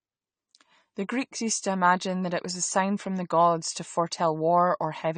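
It's a short speech recording, and the whole thing carries plainly audible AAC compression damage, likely from an AAC-LC encode at a low bitrate, something in the region of 32 kbps. Nothing comes through above about 9 kHz, so the top end is simply cut off and the sound is dull. Starved of bits, the encoder smears the detail left below that line, giving sibilants and held sounds a warbly, fizzy texture from start to finish.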